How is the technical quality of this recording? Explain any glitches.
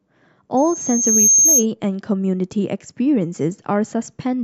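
The recording has one clear technical problem, a burst of acoustic feedback early in the speech.

Loudspeaker feedback squeal, 0.57 to 1.66 s: the microphone is picking up a loudspeaker it feeds, and at 6.4 kHz the loop gain rises above one, so that frequency keeps reinforcing itself. It is heard as a thin, piercing whistle that swells over roughly three quarters of a second until it sits a few decibels above the speech, then cuts off at 1.66 s.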